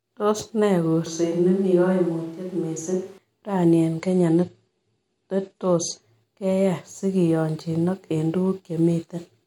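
From 1.06 to 3.18 s, just before "raini eng'", the speech turns roomy, hollow and thin at almost unchanged level, with faint background noise around 35 dB down, likely a switch to a distant microphone. After "raini eng'", from 4.01 to 6.01 s, the treble abruptly cuts off above 11.2 kHz with added codec artefacts and no gap, which fits an adaptive stream at a lower bitrate, dropping from 128 to 46 kbit/s MP3.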